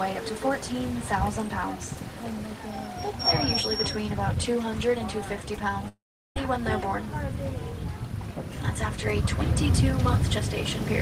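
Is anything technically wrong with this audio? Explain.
Yes. From 5.88 to 6.37 s there is a long network dropout. The audio suddenly stops advancing. The last sound is stretched into a brief buzzy smear that fades quickly. About 0.38 s of near silence follows. Then the audio returns, but roughly half a second of material is gone. The likely cause is a run of lost packets. The receiver had nothing new to play. It padded the gap with concealment, then silence.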